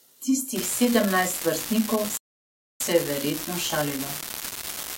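Speech with two separate faults. From 0.56 s to the end, an unreliable data bit adds a steady crackle or fizz: one marginal data line flips its bit in a random share of samples, so every click is a spike of identical size. Unlike clipping or overload distortion, it persists through pauses rather than tracking loudness. At 2.17 s a rebuffering stall cuts the sound to silence until 2.80 s, adding about 630 ms when the player ran out of downloaded audio. Unlike a dropout, it resumes exactly where it stopped, so nothing is missing and only time is added.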